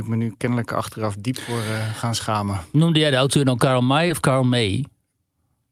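At 4.07 to 4.11 s there is a short concealed packet loss. About 20 ms of the speech never arrived, and the receiver patched roughly 17 ms by extending the preceding sound before fading back in. This gives a brief smear rather than the hard silent hole of an unconcealed dropout.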